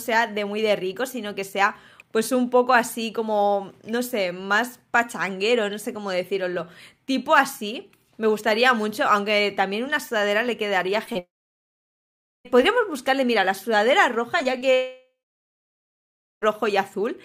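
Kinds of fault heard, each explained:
short concealed packet loss: 20 ms gaps near 11.05–11.17 s and 14.39–14.72 s were patched by extending the preceding sound, leaving brief smears or wobbles rather than silences.
long network dropout: at 11.19 s and 14.74 s a fading buzz or hiss gives way to over a second of silence, likely lost packets, unlike the momentary smears.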